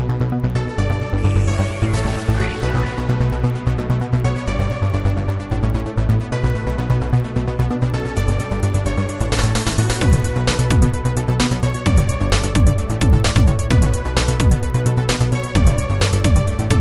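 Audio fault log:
Throughout: resampler restarted on every block. The audio was converted from 24 kHz to 48 kHz in separate 100 ms blocks. Each block edge lacked its true neighbouring samples, leaving a small error there. This gives steady ticks at 10 Hz, heard only while sound is present.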